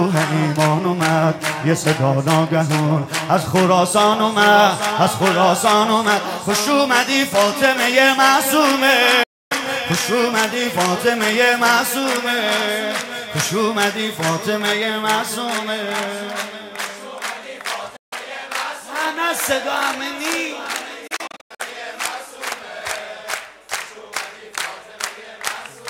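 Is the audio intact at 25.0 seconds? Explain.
Yes, at 25.0 seconds the audio is intact, with no fault to be heard there.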